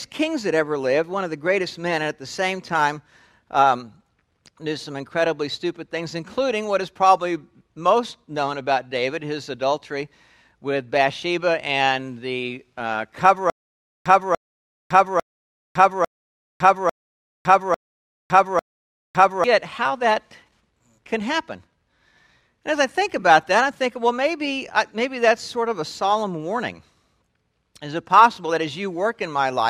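A stutter with silent gaps runs from 13.5 s to 19.44 s. A short burst of about 0.29 s plays, then cuts to dead digital silence for about 0.56 s, and the same burst returns. It repeats seven times at a steady 0.85 s interval. The likely cause is a stalled player or stream replaying its last buffered fragment at each retry before running dry. Whatever audio belonged in that stretch never plays.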